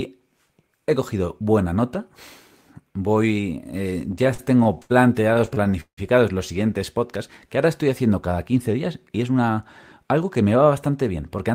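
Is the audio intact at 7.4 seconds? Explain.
Yes, at 7.4 seconds the speech is intact, with no dropout, click, distortion or other fault at that point.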